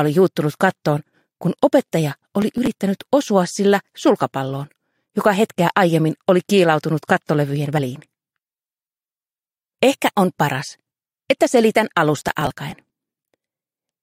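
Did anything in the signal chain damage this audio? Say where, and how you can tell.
Yes. Processor overload crackle at 2.42 to 2.73 s and 12.22 to 12.90 s. At the driver or buffer stage, tiny buffers of a few milliseconds were skipped, tearing the sound.

Compressed frames skipped at 7.77 s. This is a codec-stage fault. About 50 ms of audio jumps ahead.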